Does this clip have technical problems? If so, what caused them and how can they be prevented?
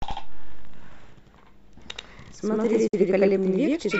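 Yes, two. There's channel delay doubling the whole way through: one channel arrives about 85 ms late, which fits a 4096-sample buffer, and when both are summed to mono the late copy sits right behind the speech as a slap echo at equal level. Keeping both channels on the same buffer path and checking alignment before any mono fold-down stops it.

Then at 2.87 to 2.94 s there's a digital broadcast dropout. The receiver lost valid frames, faded to silence over about 8 ms, and muted until good data returned, so roughly 48 ms of speech is simply gone, which points to a couple of dropped frames. Better reception, a stronger signal margin, or a recording taken from the source feed rather than off-air would prevent it.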